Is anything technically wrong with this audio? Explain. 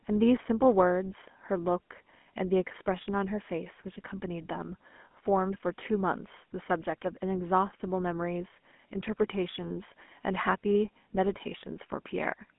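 Yes, the speech has passed through a narrowband phone codec. Throughout the clip, the GSM full-rate codec has reduced the voice to a vocal-tract model driven by a sparse, regularly spaced pulse train, consistent with roughly 13 kbps. Nothing survives above 3.6 kHz, with the line band around 200 Hz to 3.4 kHz, so the speech sounds muffled, boxy and plainly buzzy and gravelly.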